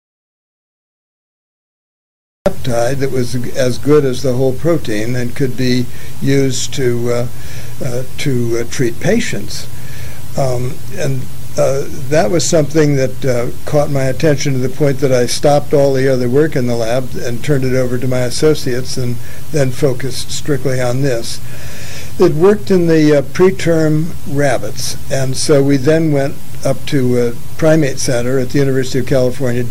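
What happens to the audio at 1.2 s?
At 1.2 s the clip sits inside an audio dropout to silence. It runs from the very start to about 2.46 s. The gap is silent with no room tone. The input was likely lost while the recorder kept writing silence, until the sound abruptly returns.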